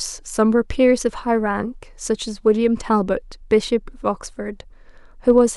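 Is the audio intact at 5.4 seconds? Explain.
No. Hard clipping runs from 5.29 to 5.38 s: the speech peaks overdrive a stage by about 1 dB, are cut flat, and crackle with added high harmonics.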